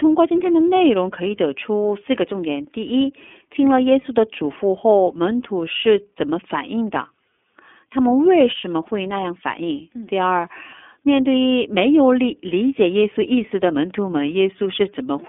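Speech runs through the iLBC codec for its whole length. Nothing passes above 3.8 kHz. The frame-by-frame coding leaves plainly audible roughness, which fits 30 ms frames at 13.33 kbps.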